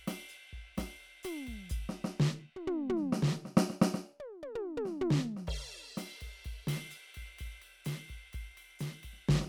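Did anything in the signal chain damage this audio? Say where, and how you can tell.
No, nothing along the chain from capture to playback has audibly damaged this music, and the signal holds together as intact audio throughout.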